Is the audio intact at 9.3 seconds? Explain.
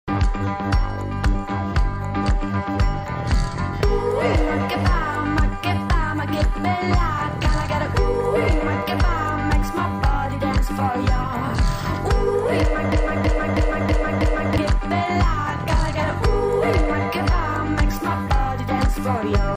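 Yes, the audio at 9.3 seconds is intact, with no dropout, click, distortion or other fault at that moment.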